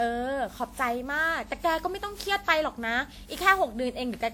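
Throughout the speech, the signal has likely been through generation loss: decoded and re-encoded many times, perhaps around fifteen, with a lossy codec whose character points to WMA at roughly 96 kbit/s. Each pass requantises on a shifted frame grid, so noise and spectral gaps pile up. The result sounds swirly and hollow, more smeared than that bitrate alone would produce, with blurred consonant attacks, though content still reaches up to about 20.1 kHz.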